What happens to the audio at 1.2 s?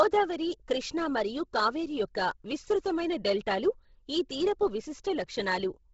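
At 1.2 s the speech carries the same damage heard throughout the clip: a breathy, grainy haze over the upper frequencies, with nothing above about 7.7 kHz. The likely cause is heavy Bluetooth LC3 compression. At a very low rate, which fits about 16 kbps in 10 ms frames, the codec discards most of the upper spectrum and fills the gap with synthetic noise. A plain low-pass filter would sound dull and clean instead. This sounds hissy and rough.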